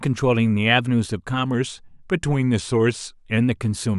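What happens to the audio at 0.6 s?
Nothing goes wrong at 0.6 s; the speech carries on intact through that moment.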